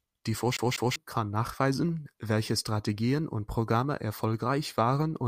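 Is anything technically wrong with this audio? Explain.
Yes. CD stuck on one turn, from 0.57 to 0.96 s: a scratch keeps knocking the laser back by one track at the same point on each revolution, so the player rereads a 196 ms slice of the speech instead of moving forward. That slice plays twice in a row, with a brief mute at each jump back, giving the quick, evenly spaced stutter of a skipping CD before playback moves on.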